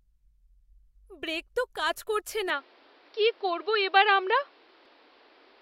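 At 2.5 s, right after "ব্রেক তো কাজ করছে", the speech abruptly turns duller and boxier with no gap and no level change. The input was likely switched to a poorer device. A new, faint background noise sits roughly 35 dB below the voice. On a spectrogram, energy above 5.7 kHz vanishes along a flat ceiling from 2.5 s to the end.

At 4.86 s, damaged data in a compressed stream gives a brief blip. The decoder misread a corrupted frame, lost sync and searched for the next valid header.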